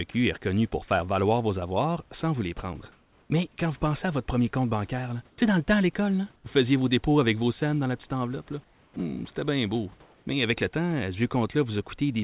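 At 0.12 and 0.88 s, brief sound dropped by the voice detector: 20 ms of speech gives way to flat noise, likely because the detector mistook part of the speech for background. Unlike the later gaps, actual speech goes missing. From 5.3 to 5.38, 6.36 to 6.44, 8.64 to 8.96 and 10.02 to 10.26 s, comfort noise takes the place of the background, likely from discontinuous transmission: the textured room noise turns featureless, and at 6.36 and 8.64 s it also drops by about 7 dB. No speech is lost in these pauses.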